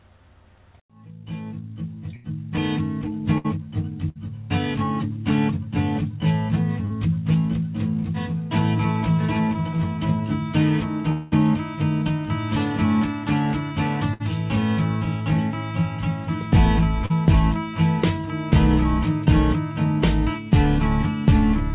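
A burst of packet loss occurs at 2.16 to 2.26 s, 3.38 to 3.59 s and 4.09 to 4.17 s. Each time, roughly 60 to 80 ms of audio goes missing. The receiver extends the last sound as a fading buzz or hiss, then resumes further on.

At 6.85 to 6.92 s, a short concealed packet loss of about 40 ms shows up as a brief smear where the decoder bridged the hole.

From 11.12 to 11.34 s, a 200 ms stretch is replaced by a decaying buzz or hiss, likely a long network dropout, before the audio returns without the lost section.

Another burst of packet loss follows at 14.14 to 14.22 s, with about 60 ms missing. A second short concealed packet loss at 17.06 to 17.12 s leaves a similar 40 ms wobble.

Throughout, the call path limits the band to 4 kHz, which fits G.711 mu-law coding.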